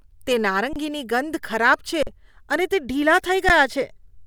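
Speech clip with three dropouts from an underrun with held sample, at 0.73–0.76 s (26 ms), 2.03–2.07 s (43 ms, 2048 samples) and 3.49 s. The output froze at its last value, a flat line on the waveform and a blank spectrogram strip, then resumed after missing audio.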